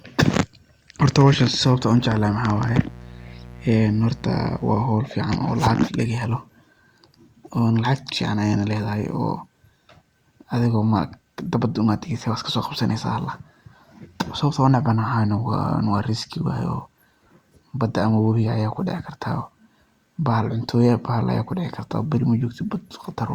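From 1.94 s to 4.84 s a mains buzz sits under the speech: a steady, raspy drone built on 60 Hz. Sharp switching spikes, as from a dimmer or rectifier or through a missing shield, enter twice per mains cycle, so harmonics of 60 Hz climb into several kilohertz. It sits roughly 20 dB below the speech. A spectrogram shows evenly spaced horizontal lines starting and stopping with the buzz, and the waveform carries a fine periodic spike pattern.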